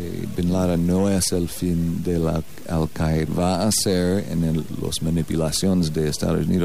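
Nothing is technically wrong with this audio; there are no faults to place in time or trace to a cause.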